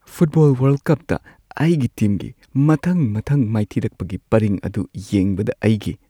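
Listening closely to the speech recording, nothing stood out as a technical fault at any point.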